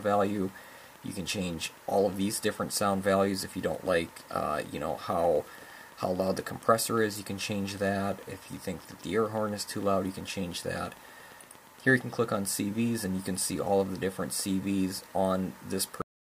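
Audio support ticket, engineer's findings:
Train of clicks, 0.03 to 12.48 s. Likely interference pickup or a faulty connection or power supply injecting a near-identical pulse at a steady 8.68 per second, around a hundred in all. Heard as regular ticking roughly level with the programme, through pauses too.

Cut-off end at 16.02 s. Final buffers never written or played out. Audio stops mid-sound and drops straight to digital silence with no decay, through to the end of the file.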